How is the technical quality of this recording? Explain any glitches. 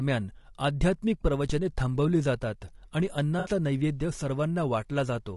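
The recording has audible technical faults: continuous coding damage throughout, one low-frequency thump, and one brief concealed dropout.

Throughout the speech, the sound is rough and grainy, with noise filling the gaps between harmonics and a thin, synthetic-sounding top band. This is likely low-delay AAC compression (AAC-ELD). Its short frames resolve pitch poorly, and the damage fits a bitrate around 32 kbps.

From 1.50 to 1.69 s, a phantom power thump is heard as a deep low-frequency bump with a fast initial decay of about 44 ms. It is a supply switching on a live input, with the voltage step passing through the coupling capacitors into the signal.

From 3.39 to 3.49 s, AAC frame loss with concealment appears as a short smeared, noisy patch lasting about 60 ms, which fits three lost frames. The decoder filled the gap by extrapolating from the last good spectrum instead of the real signal.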